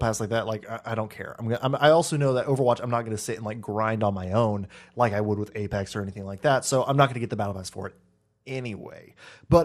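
Throughout the speech, MP2 compression at a low bitrate, likely around 80 kbps, sounds dull, gurgling and granular; spectrograms show upper sub-bands flickering on and off.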